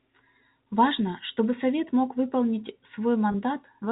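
At 3.32 s, a brief packet loss with pitch repetition occurs, lasting until about 3.34 s. Roughly 20 ms of audio, consistent with a single lost packet, went missing. The receiver covered the gap by replaying the most recent pitch period. Because the gap is so short, the concealment never fades toward silence. It is heard as a momentary held, slightly buzzy tone before the speech resumes, all within the narrow 4 kHz band of the G.711 telephone coding.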